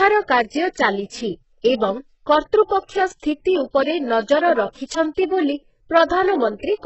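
Right from the start and all the way through, the speech has that heavy, smeared treble you get from HE-AAC compression at a very low bitrate, likely something around 8 kbps. The upper band isn't really the original; it's been rebuilt by copying lower bands up and shaping them roughly. So the s sounds come out gritty and metallic, with a lispy edge, and nothing at all survives above 8 kHz.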